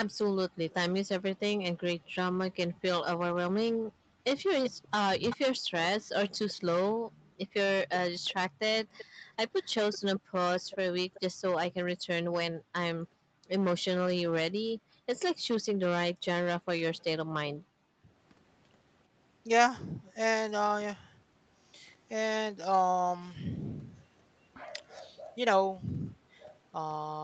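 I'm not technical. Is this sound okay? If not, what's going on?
No. The speech has a harsh, fuzzy edge on every loud moment throughout. This is hard clipping: the sound was too loud for the recording chain, so its peaks were sliced flat.

From 0.11 to 16.26 s, the background noise keeps dipping to near silence and coming back. This is background gated by the echo canceller, which sharply turned the microphone down while the other side's loudspeaker played.

From 4.64 to 11.2 s, a faint, delayed copy of the speech trails about 0.38 seconds behind. This is likely an echo leak: the loudspeaker's sound reached the microphone and wasn't fully removed before being sent back.

The voice briefly drops out or thins between 5.03 and 5.53 s and again between 17.79 and 18.04 s. This is speech suppressed in double talk, likely because both sides spoke at once and the echo canceller turned everything down.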